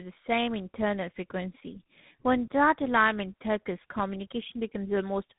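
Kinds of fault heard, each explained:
Tandem speech coding: the speech passed through consecutive codecs, GSM full rate then G.726, each re-encoding degraded output; rough, warbly, muffled, spectrogram empty above 3.8 kHz.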